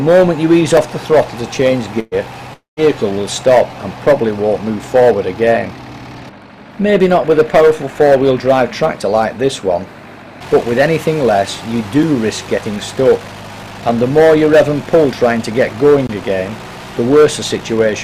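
Sharp ticks at 0.77 s and 12.03 s, and a short hole at 16.07–16.09 s, are blocks of digital silence: output buffers left unfilled, the last two fitting 256- and 1024-sample buffers. At 2.00–2.14 s the sound stretches into a held, fading tail for about 0.12 s and then jumps ahead, the mark of a burst of packet loss concealed by continuing the last sound. At 2.53–2.80 s a similar fading fill drops into about 0.14 s of silence before the audio resumes roughly a quarter second further on, likely a long network dropout.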